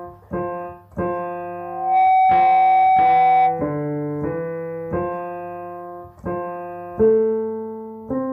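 Loudspeaker feedback squeal runs from 1.59 to 3.73 s: a single 755 Hz tone swells out of the audio in under half a second and sits roughly 10 dB above the rest of the sound until it stops at 3.73 s. It arises when a microphone picks up the loudspeaker it is feeding and the loop gain at 755 Hz exceeds one, so that frequency keeps reinforcing itself on each pass around the loop.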